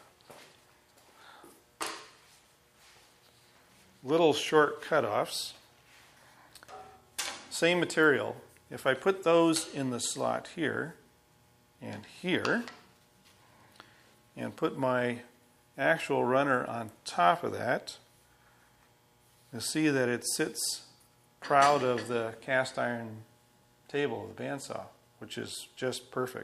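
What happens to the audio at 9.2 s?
Nothing goes wrong at 9.2 s; the audio plays through that moment intact, with no dropout, click, glitch or other fault.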